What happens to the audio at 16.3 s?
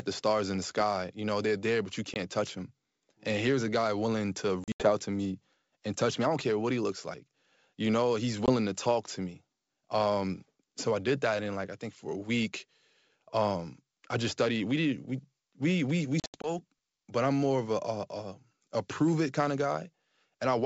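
Packet loss on an ADPCM call, 16.20 to 16.51 s: about 140 ms of sound drops out in hard-edged gaps, the longest 80 ms, seen as flat waveform stretches. Each restart, with the decoder's predictor and step size out of step, comes back slightly distorted before settling.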